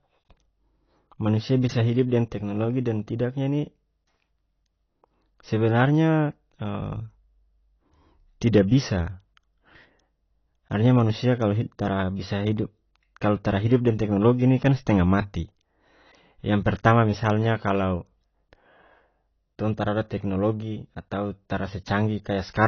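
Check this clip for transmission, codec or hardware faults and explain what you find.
There's one fault, and it runs the whole way through: AAC compression damage that's plainly audible. Nothing comes through above 6.6 kHz, so the speech sounds dull and smeared, and sibilants smear into a fizzy, warbly texture. The likely cause is a low-bitrate AAC-LC encode, which fits something around 24 kbps. At that rate the encoder can't afford the upper bands, so it cuts them off and quantises what's left coarsely, leaving gaps that swirl frame to frame.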